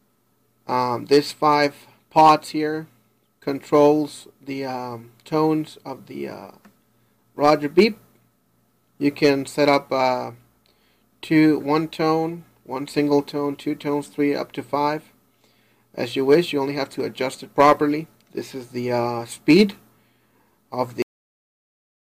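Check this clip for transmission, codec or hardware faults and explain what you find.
There is one fault, a cut-off end at 21.02 s. The recording stops in the middle of a sound there, and the last second, up to 22.06 s, is flat digital silence. The final buffers were never written out, so nothing after that point was stored or played. The sound does not fade or decay. It drops straight to silence, and that abrupt truncation is the audible giveaway that the capture ended before the source did.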